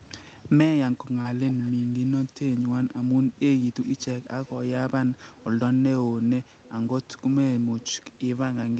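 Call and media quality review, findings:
Short concealed packet loss at 1.21–1.27 s: brief smear. About 40 ms never arrived; the decoder stretched the previous sound over the hole and blended back in. Jitter buffer/PLC.

Echo leak: faint delayed copy of the talker, 246 ms behind, at about -20 dB at 1.48–1.71 s. Quieter at 4.00, 4.23–4.52, 5.37, 6.46–6.71, 7.80–7.91 and 8.12 s. Likely far-end speakerphone with an echo canceller not fully suppressing. Rest of the path sounds like Opus, band-limited around 8 kHz.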